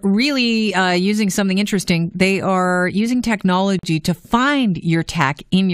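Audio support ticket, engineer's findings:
Speech clip, gap at a join of encoded pieces at 3.79 s, running to 3.83 s. Roughly 42 ms gap dropped into continuous speech, edges smeared by the codec, and the sound picks up right where it left off. Probable component: the concatenation step. Pieces look encoded separately and butted together untrimmed, so the encoder's start-up delay and last-frame padding both survive at the seam. Interval suggests segments around 6 s long, so only this one join lands in the clip.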